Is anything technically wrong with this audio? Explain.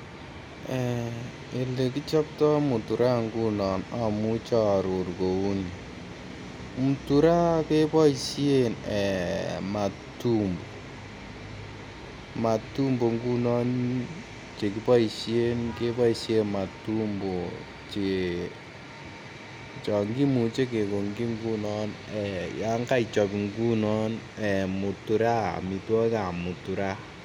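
No, nothing technically wrong turns up anywhere in this recording; it all sounds just as it should.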